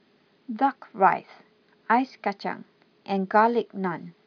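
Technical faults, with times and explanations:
Nothing stood out as a technical fault on listening to this speech recording.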